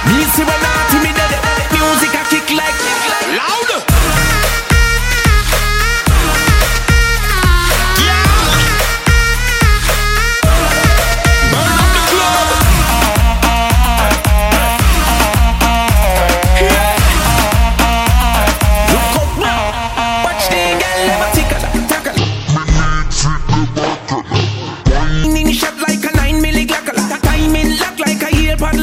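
From 22.18 to 25.24 s the sound abruptly drops in pitch, by roughly ten semitones, and drags at half its proper pace, turning deep and slow before snapping back to normal. This is a section at the wrong speed. Because pitch and tempo fall together, the cause is likely a player or editing step that ran this stretch against the wrong clock, stretching it to twice its length.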